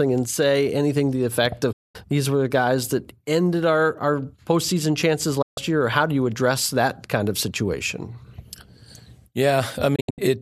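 The speech drops out three times, each with a very quick fade of about 8 ms into silence. The first falls from 1.72 to 1.95 s, between "anything to the effect" and "these were the guys". The second runs from 5.42 to 5.58 s, after "postseason chances" and before "year or how do". Near the end, from 9.95 to 10.21 s, the sound breaks into several short holes, the longest about 72 ms. This is a digital broadcast dropout. The receiver muted whenever frames were lost or corrupted, which points to frames of roughly 24 ms, and whatever was sent during those gaps is gone.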